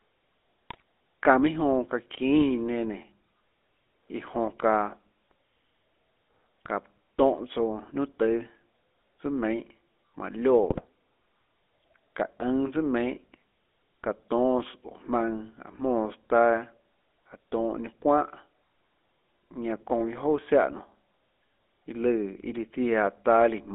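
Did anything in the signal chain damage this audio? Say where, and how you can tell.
Yes. The codec stage damaged the whole clip. This is GSM full-rate coding. The speech is confined to a line band of about 250 Hz to 3.5 kHz, with nothing above. Throughout there is a buzzy, gravelly roughness. That texture fits a 13 kbps full-rate coder. It models the vocal tract and drives it with a sparse, regularly spaced pulse excitation. The fine detail between the pulses is lost, so the voice sounds grainy.

The network stage adds GSM bit errors in two short bursts. The first runs from 0.70 to 0.82 s. The second runs from 10.70 to 10.81 s. Each burst is a brief squawk and gargle. The spectrum bends or the level jumps. Corrupted bits reached the decoder's filter, pitch or gain values. Each frame then decoded wrongly. The first burst hit seven frames, and the second four.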